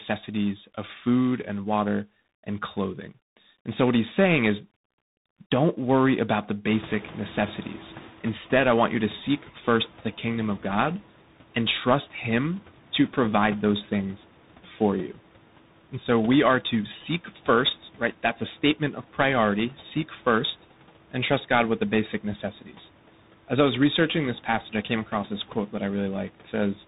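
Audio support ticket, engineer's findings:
Tandem speech coding, whole clip: rough, noisy speech; nothing above 3.8 kHz. Likely cause: successive codec stages each re-encoding degraded output, consistent with ADPCM into CVSD. Spectrogram: hard ceiling at 3.8 kHz, smeared, grainy harmonics.

Noise suppressor catching up, 6.68–9.47 s, after "don't worry about the", settling by "first the kingdom of": room noise jumps about 24 dB near 6.5 s, passes underreduced, then sinks about 9 dB over 2.79 s. Spectrogram: noise-floor step, gradual fade.

Speech cut by the noise suppressor, 22.61–22.75 s, right after "with the basic": roughly 100 ms of speech dips about 12 dB and sounds swallowed. Suppressor misclassified low-level speech as noise. Waveform: brief envelope notch; spectrogram: momentarily faded harmonics.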